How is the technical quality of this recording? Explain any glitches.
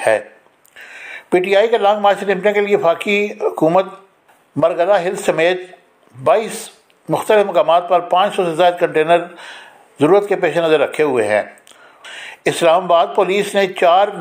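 No glitches can be heard anywhere in the recording. Nothing in it calls for explanation.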